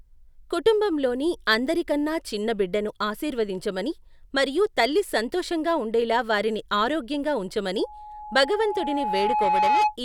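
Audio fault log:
7.79–9.97 s, loudspeaker feedback squeal: after "సంతోషంగా ఉండేలా వారిని ఆరోగ్యంగా", an 844 Hz tone swells over about two seconds, ending louder than the speech. The microphone-loudspeaker loop gain exceeds one at that pitch.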